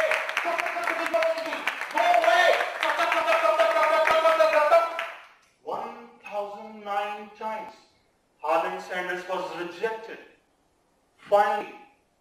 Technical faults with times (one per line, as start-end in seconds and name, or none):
1.14 dropped buffer (overrun)
4.11 dropped buffer (overrun)
7.69 dropped buffer (overrun)
11.61 dropped buffer (overrun)